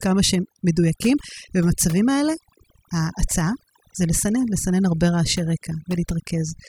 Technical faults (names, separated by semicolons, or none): overdone noise removal